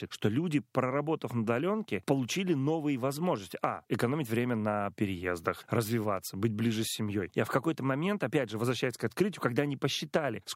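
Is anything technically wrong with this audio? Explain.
No, nothing is technically wrong with this audio.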